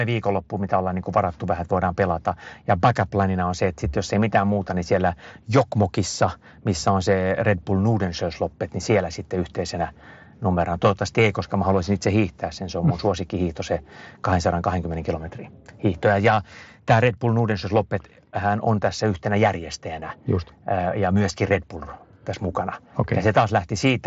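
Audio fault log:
No faults found; the speech runs over a Bluetooth mSBC headset codec link, with its band topping out near 7.7 kHz and a light grain on louder passages.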